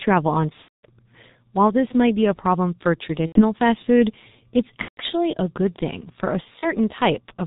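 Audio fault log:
throughout: G.723.1 codec. The speech is muffled and hoarse, with nothing above 4 kHz and consonants smeared into one another. The heavy damage comes from coding at about 6.3 kbit/s in 30 ms frames. At that rate the codec's model of the voice refreshes only slowly, so fast changes in the sound are lost and fine detail is replaced by a rough approximation.
0.62–0.87 s, 3.27–3.43 s, 4.82–5.01 s, 6.59–6.68 s: VoIP packet loss concealed by the speech codec. At each of these spots the speech turns into a drawn-out buzzy tone or tinted noise that sinks in level, and the voice then comes back weak or distorted for a short while. The pattern fits bursts of lost packets covering about 210, 90, 150 and 30 ms. The decoder fills each gap by repeating its last pitch and filter at a falling gain. Because every frame builds on the one before it, recovery lags behind the returning packets.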